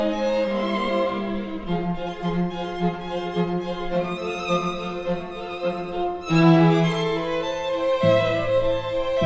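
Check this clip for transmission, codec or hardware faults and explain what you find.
Nothing audible here points to a transmission, codec or hardware fault.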